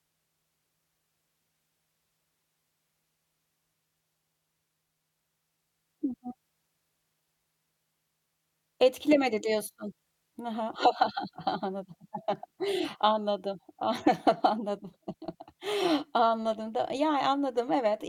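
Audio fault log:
No fault is heard in this speech clip.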